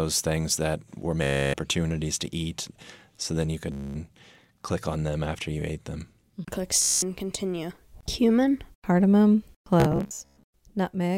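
Bluetooth stutter breaks the speech four times. At 1.23 s, after "things that were", about 0.3 s is lost. At 3.72 s, after "then you", 0.23 s goes. At 6.82 s, just before "and continue", 0.2 s drops. Each time, late or missing packets make the receiver repeat its last short slice. That gives a buzzing, machine-gun stutter. Speech then resumes further on, as if it had played on. From 9.80 s to 10.43 s, shorter gaps scatter, the longest 0.12 s.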